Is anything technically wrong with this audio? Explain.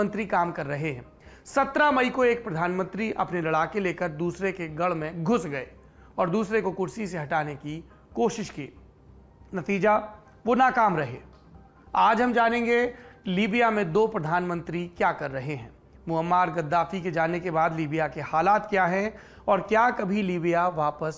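No, nothing technical stands out here, so there's nothing to flag and you can relax about this one.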